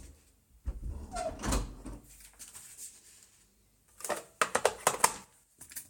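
Listening closely to these everyday sounds, nothing in the audio stood out as a technical fault.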